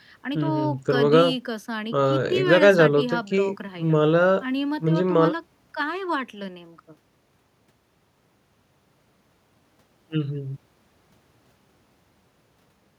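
No technical faults are audible.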